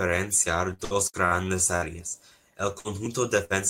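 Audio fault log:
0.73–1.34 s, repeated packet loss (robotic sound): four concealed gaps, longest 61 ms, fill 38% of the span, giving choppy speech with about 120 ms missing.
1.76–1.85 s, 2.79–2.88 s, 3.45–3.53 s, burst of packet loss: each time about 55 ms of extended, fading sound covers the hole, and speech resumes with 60 ms missing.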